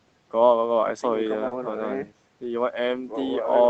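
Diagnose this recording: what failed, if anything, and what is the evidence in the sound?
Network stage, lost packet rebuilt from error correction: brief rough, noisier patches at 0.65–0.67 s and 1.51–1.53 s, each a 20 ms packet replayed from the next packet's low-bitrate copy.

Network stage again, short concealed packet loss from 1.47 to 1.53 s: 40 ms never arrived, so the decoder extended the preceding sound, giving a quick smear before the rebuilt frame.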